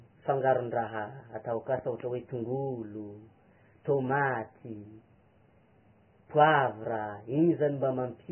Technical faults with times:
0.00-8.32 Vorbis compression
1.79-2.02 loud pop

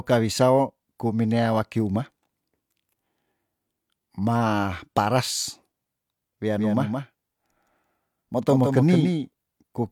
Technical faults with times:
6.57-9.91 doubled audio track

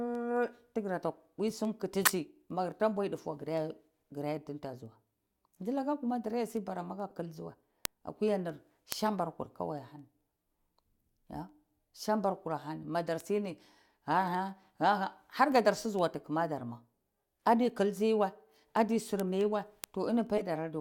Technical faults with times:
0.15-20.69 word clock ticks
2.05-2.13 corrupt frame decoded
7.10 corrupt frame decoded
20.38-20.42 corrupt frame decoded

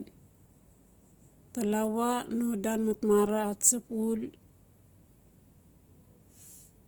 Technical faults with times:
0.00-6.88 Opus compression

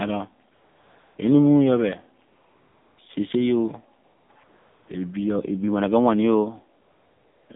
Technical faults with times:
0.00-7.56 AMR narrowband mobile codec
0.54-1.18 AMR comfort noise
2.28-2.98 AMR comfort noise
4.04-4.88 AMR comfort noise
6.82-7.50 AMR comfort noise

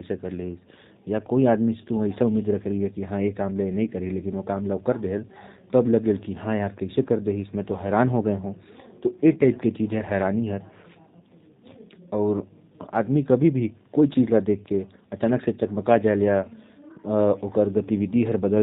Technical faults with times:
0.00-18.62 G.729 codec

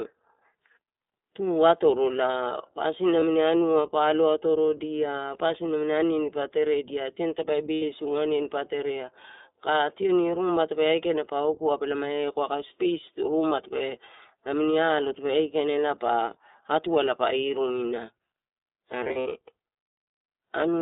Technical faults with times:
0.00-20.82 iLBC codec
3.20-3.23 lost iLBC frames
7.74-7.83 lost iLBC frames
19.04-19.32 lost iLBC frames

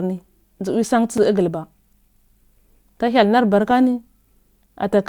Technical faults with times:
1.18 block of digital silence
3.71 block of digital silence

